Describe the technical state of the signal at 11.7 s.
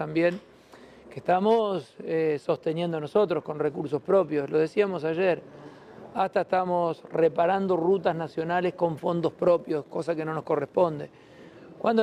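Nothing goes wrong at 11.7 s; the signal there is intact, with no dropout, distortion or other fault to be heard.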